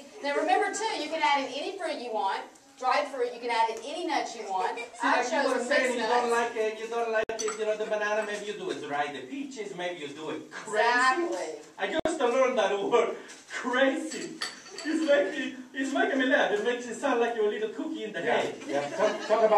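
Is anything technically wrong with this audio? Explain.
Yes. A gap at a join of encoded pieces appears at 7.24–7.29 s and again at 12.00–12.05 s. Each is a sudden silence of about 58 ms with softened edges. Separately encoded segments were butted together with their start-up delay and final-frame padding left in, so the sound then resumes exactly where it stopped.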